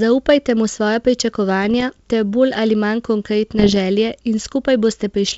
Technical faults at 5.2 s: none

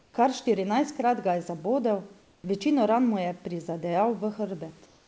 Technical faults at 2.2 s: comfort noise in place of the background

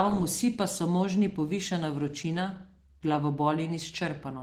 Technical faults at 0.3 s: Opus voice compression

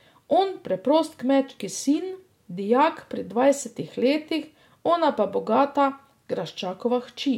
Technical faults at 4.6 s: none

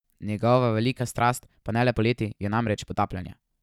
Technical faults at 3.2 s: time-stretched section

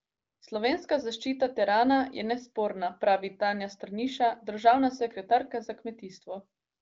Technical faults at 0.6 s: none

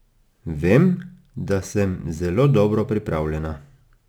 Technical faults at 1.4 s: crude rate conversion

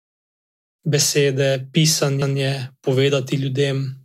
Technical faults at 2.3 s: repeated buffer

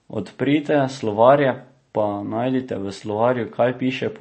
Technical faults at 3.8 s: MP3 compression

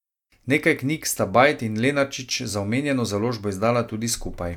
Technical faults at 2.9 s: none

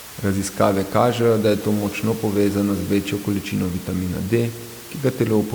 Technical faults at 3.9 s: none

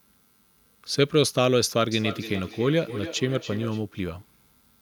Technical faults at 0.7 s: none

